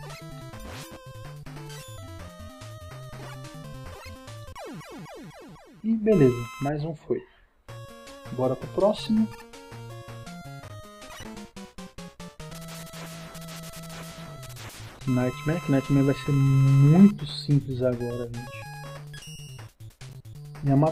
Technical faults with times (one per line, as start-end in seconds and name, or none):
none